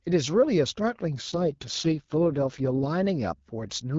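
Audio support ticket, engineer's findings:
AMR rate drop, 1.29 to 2.88 s: speech goes rough, raspy and synthetic, then clears. Bandwidth holds, no gap. Probable cause is the network pushing AMR-WB down to save bits for error protection on a weak link. The sound points to a drop from about 12.65 to 6.6 kbit/s and back. Outside that stretch the HD Voice codec leaves only light coding grit.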